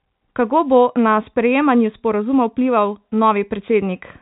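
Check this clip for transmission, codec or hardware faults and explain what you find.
No transmission, codec or hardware faults are audible in this speech; the band stops at about 3.8 kHz, consistent with ordinary G.711 telephone coding, and any quantisation noise riding under the signal is faint at most.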